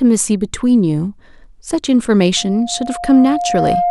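A speech clip with loudspeaker feedback squeal from 2.36 s to the end at 3.90 s. A single 704 Hz tone swells over roughly a second and a half until it matches the speech level, because the microphone is re-amplifying its own loudspeaker. Unlike a steady hum or whistle, it grows by itself.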